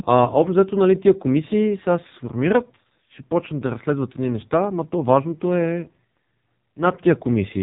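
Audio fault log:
throughout, AMR narrowband mobile codec: the speech sounds buzzy, thin and synthetic, as though heard over an old mobile call, with nothing above about 3.7 kHz. The codec rebuilds the voice from a vocal-tract model driven by only a few pulses in each short frame, at 8 kHz sampling, so the upper band is gone. The heavy damage fits one of AMR-NB's lowest modes, around 5.9 kbps, where too few bits remain to keep the voice natural.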